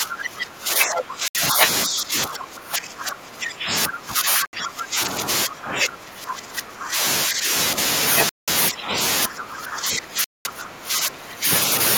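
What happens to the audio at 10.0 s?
At 10.0 s you're in the middle of speech suppressed in double talk, running from 9.26 to 11.5 s. The speech sinks by up to around 20 dB, likely because the echo canceller could not separate this side's talker from the loudspeaker echo and clamped everything.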